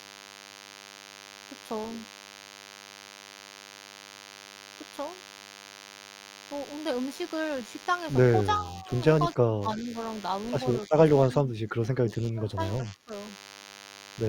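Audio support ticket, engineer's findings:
DECT cordless phone buzz, whole clip. Nearby DECT base or handset transmitting a burst every 10 ms, rectified in the audio input stage. Result: steady thin buzz at 100 Hz plus dense harmonics, around 15 dB below the speech.

Speech suppressed in double talk at 8.58–8.89 s, 9.35–9.97 s, 10.87–10.96 s, 11.26–12.59 s and 12.8–13.12 s. Likely echo canceller mistaking local talker for loudspeaker echo during overlap. Speech level dips, from slight to roughly 30 dB, longest stretch over a second.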